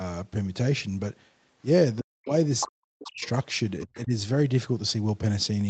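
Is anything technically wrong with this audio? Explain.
Yes, there are three kinds of fault, mostly clustered between about 2.0 and 4.1 s.

Speech suppressed in double talk: from 2.0 to 2.32 s, 2.68 to 3.22 s and 3.85 to 4.12 s, the speech sinks sharply, by around 40 dB at its deepest in the first two stretches and around 30 dB in the third, so it nearly vanishes in pieces. The likely cause is that both parties spoke at once and the echo canceller, unable to tell the talker from the loudspeaker echo, clamped down on everything.

Other side's voice leaking through: a second voice surfaces from 2.6 to 2.68 s, fairly prominent at only about 5 dB under the main speech. It returns more faintly from 3.02 to 3.28 s and from 3.79 to 4.03 s, at about 20 dB and 25 dB below. This is likely far-end audio played on the talker's loudspeaker that the echo canceller failed to fully strip from the microphone signal.

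Lost packet rebuilt from error correction: from 3.49 to 3.51 s a single 20 ms frame turns briefly rougher and grainier, with no silence or gap. The packet was lost, but the next one carried a low-bitrate copy of it, which the Opus decoder played in its place. That patch is coarser than the 32 kbps stream around it, whose content stops at 8 kHz.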